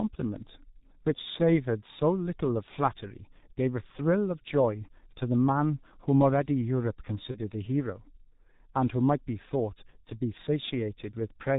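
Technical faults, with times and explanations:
Throughout: G.723.1 codec. The audio was squeezed through a very low-rate telephony coder working in 30 ms frames, and the heavy damage fits a rate of about 6.3 kbit/s. Nothing above 4 kHz survives, so the speech is muffled. Because the coder's voice model updates only once per frame, rapid changes are smeared, leaving a hoarse, rough texture and blurred consonants.
7.31–7.40 s: VoIP packet loss concealed by the speech codec. About 30 ms of audio went missing, consistent with a single lost frame. The decoder filled the gap by repeating its last pitch and filter settings at falling gain, so a stretched, fading sound replaces the real sound. Because each frame is built on the previous one, the speech stays weak or distorted for tens of milliseconds past the lost 30 ms.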